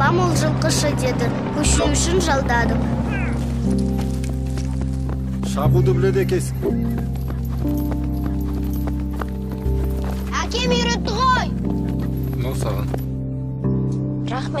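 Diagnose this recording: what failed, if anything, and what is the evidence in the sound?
Loud, brief noise bursts at 1.76–1.88 s, 4.69–4.74 s (much quieter) and 6.62–6.71 s: a corrupt frame decoded at the codec, with damaged bits misplacing energy across a couple of frames.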